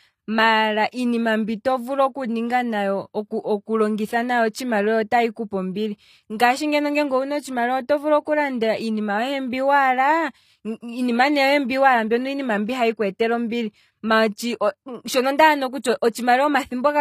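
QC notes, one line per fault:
throughout, HE-AAC compression: the top end just stops at about 14.9 kHz, and the treble above the coded band sounds rebuilt rather than real. Sibilants come out gritty and lispy, with plainly audible damage that points to HE-AAC at a low bitrate, likely somewhere around 24 kbps.
8.25 s, pre-echo: there's a hiss about 17 ms long just ahead of a sharp speech onset, and the attack itself sounds smeared. The codec spread its noise across the whole block, so the quiet moment before the transient got filled in.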